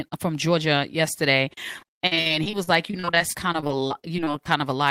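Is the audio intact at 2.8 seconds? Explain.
No. At 2.8 seconds the speech sits inside a stretch of repeated packet loss (robotic sound) that runs from 1.79 to 4.59 s. Packets keep going missing or arriving late. Each hole is patched by stretching the last bit of sound, and the next dropout arrives soon after. There are nearly thirty gaps, none longer than about 50 ms. Roughly a fifth of the stretch is filled-in sound. It comes across as choppy, with pieces missing.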